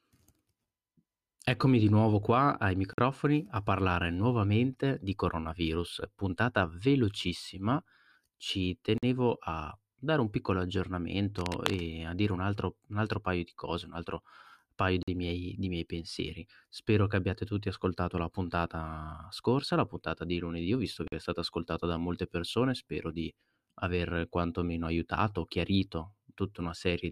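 At 2.93–2.98 s, between "di nuovo qua ai" and "a parlare nuovamente di", the speech stops for a 48 ms hole. It recurs at 8.98–9.03, 15.03–15.08 (after "cose un altro paio") and 21.08–21.12 s. This is a gap between chunks: silence inserted at each join of 6 s blocks. Unlike a dropout, the even spacing stands out and no speech is missing.

From 11.38 to 11.81 s, just before "a dire un altro", a dense, uneven rustling sits about 10 dB below the speech. This cable scratch noise likely comes from a worn cable or connector being moved. It differs from a single click or pop because it is a sustained, irregular scratch.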